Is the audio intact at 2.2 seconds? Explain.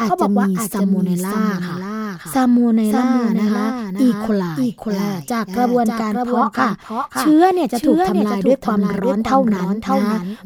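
No. At 2.2 s, as throughout, a doubled audio track repeats the speech about half a second later, somewhat quieter, likely from an out-of-step second capture path. Unlike an echo, the copy is full-band with no decay or room colour.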